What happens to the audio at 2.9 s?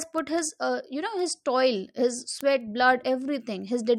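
At 2.9 s the speech sits within a run of word clock ticks from 0.18 to 3.82 s. An unlocked receiver clock slips about every 0.2 s, dropping or repeating one sample. This causes sharp, uneven ticks, seen as evenly spaced thin vertical lines on a spectrogram.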